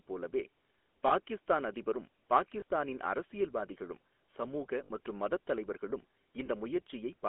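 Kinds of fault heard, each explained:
GSM full-rate codec: Throughout the clip the speech has a buzzy, gravelly roughness and sits in a narrow telephone band of about 250 Hz to 3.4 kHz, so it sounds thin and boxy with nothing bright on top. The cause is a coder that models the vocal tract and drives it with sparse, regularly spaced pulses, keeping only every third excitation sample. This is consistent with the 13 kbps full-rate scheme, and the damage is plainly audible.
lost GSM frames: Brief rough, metallic rings interrupt the speech at 1.08, 2.6, 4.84 and 6.46 s, where the sound seems to stick for a moment instead of moving on. At each point the decoder had no usable frame, so it repeated the settings of the last good one. Three of these fit a single 20 ms frame. The one at 4.84 s fits about 60 ms of missing audio and is the longest.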